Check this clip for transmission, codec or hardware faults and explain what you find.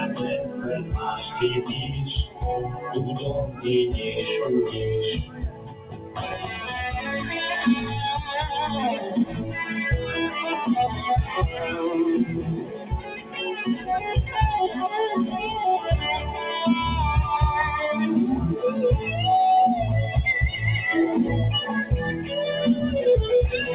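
The main fault is a speech-tuned noise suppressor left running on non-speech audio. It carries through a narrowband call path whose band ends at 4 kHz, which fits a G.711-style codec.

Noise suppressor applied to music or sounds, throughout: The suppressor treats sustained tones, ambience and decays as noise, so the level swings by roughly 10 dB. Attacks pass while held material sinks, giving a pumping, thinned character. On a waveform the envelope breathes unevenly, and a spectrogram shows sustained bands fading in patches.

Sound cut by the noise suppressor: Dips occur at 0.44–0.98, 1.2–1.35, 2.25–2.43, 2.69–2.92, 3.46–3.66, 5.2–6.65, 9.25–9.55 and 12.57–13.39 s. The drops are about 7 to 13 dB, deepest at 5.2–6.65 s. Steady content is mistaken for noise and cut, so tails vanish early. These show as sudden envelope troughs and darkened spectrogram stretches.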